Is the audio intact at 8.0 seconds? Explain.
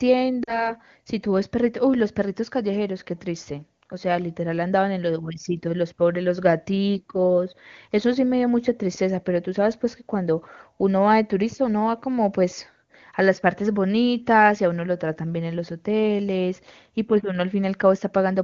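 Yes, the speech is intact at 8.0 seconds, with no dropout, click or distortion at that moment.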